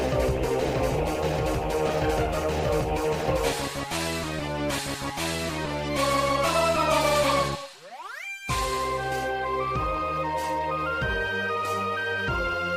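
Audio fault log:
No faults detected.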